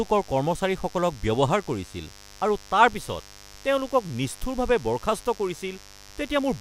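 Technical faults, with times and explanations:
Throughout: mains buzz, a steady raspy buzz about 25 dB below the speech, from switching spikes twice per 50 Hz cycle spreading harmonics into kilohertz.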